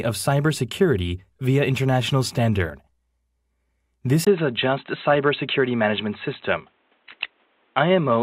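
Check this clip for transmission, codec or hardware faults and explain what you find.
An input switched to a poorer device, likely, at 4.25 s, persisting to the end: after a 20 ms silence the band stops near 4 kHz, leaving a dull, boxy tone at an unchanged level, with a new background noise sitting roughly 45 dB under the signal.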